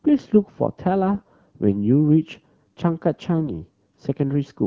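Speech carried over wideband AMR, whose light coding character points to a rate around 12.65 kbit/s, breaks into AMR bit errors at 1.14 to 1.28 s and 3.39 to 3.50 s. Flipped low-priority bits, a few percent, misplace excitation pulses, so the voice turns hoarse and gargly while keeping pitch and level, unlike packet loss, which mutes or smears.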